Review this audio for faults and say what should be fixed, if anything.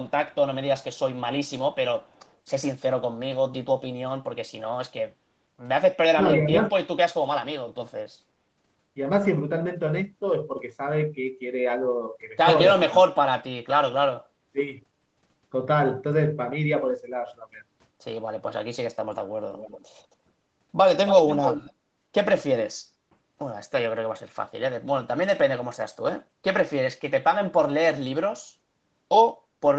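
A faint, delayed copy of the speech trails behind it between 0.08 and 0.35 s, 0.83 and 0.99 s, and 2.05 and 2.36 s, lagging about 293 ms and barely audible. It returns far stronger at 19.5 to 20.15 s and 21.06 to 21.73 s, now lagging 271 ms. The first of these is clearly audible, and the second is nearly as loud as the speech itself. This is echo leak, likely from a loudspeaker-side echo canceller letting its microphone pickup slip through and back into the call. The change in delay and the jump in level suggest the canceller lost track as the echo path shifted. Prevention: use headsets, or make sure the echo canceller adapts and suppresses residual echo reliably on the loudspeaker end.

From 6.14 to 6.58 s the speech briefly sinks, dipping by about 10 dB in patches that add up to roughly a third of a second. This is speech suppressed in double talk. While the other side was talking, the echo canceller likely could not separate this talker from loudspeaker echo and attenuated everything together. 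Prevention: tune the echo canceller's double-talk detection so near-end speech is held at full level when both sides talk at once.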